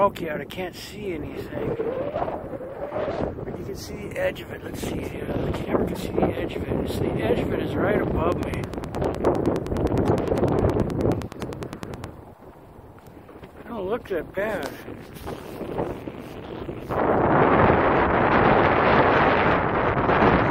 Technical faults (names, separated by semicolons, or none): broken MP3 bit reservoir; train of clicks